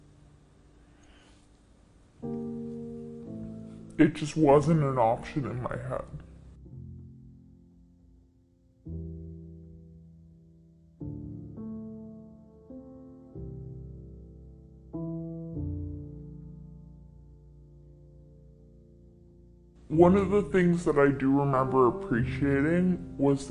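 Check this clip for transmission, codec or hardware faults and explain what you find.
One fault runs through the whole clip. Wrong sample rate, throughout: samples play at two-thirds speed without conversion, fitting 48 kHz material played at 32 kHz, so everything sounds slow and about 7 semitones low.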